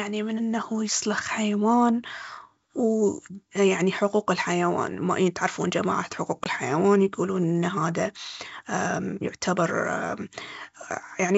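Packet loss on the ADPCM call at 6.44 to 6.49 s drops one packet, leaving a hard-edged 20 ms silence; speech then returns distorted while the decoder's predictor resynchronises.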